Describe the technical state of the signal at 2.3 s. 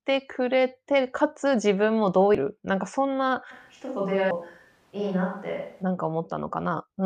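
At 2.35 s there is damaged data in the compressed stream. The decoder misreads the corrupted frame, loses sync and resumes at the next header, leaving a brief glitch heard as a chirp, squawk, click or short hole.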